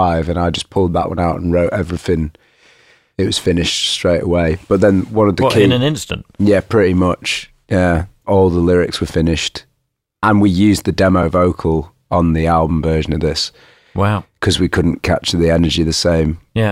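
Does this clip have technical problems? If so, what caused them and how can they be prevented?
Yes. At 11.23 s, between "and we used the" and "vocal on the album", the speech drops to a block of digital silence lasting 5 ms, heard as a tick or dip. The audio cuts out and back with no fade. Unlike a network dropout, nothing is smoothed or filled in, and unlike clipping, the signal vanishes rather than flattening at its peaks. Giving the audio thread a larger buffer and higher priority prevents such underruns.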